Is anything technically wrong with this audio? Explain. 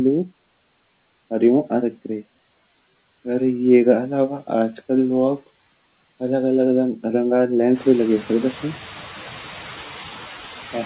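Yes, there are noise suppressor artifacts throughout the speech. The suppressor pulls bands it reads as steady noise down by about 13 dB, so the background dips between words and swells under them. It's more noticeable once the room noise jumps around 7.5 s, and everything sits under a 4 kHz ceiling, which fits a G.711 call path.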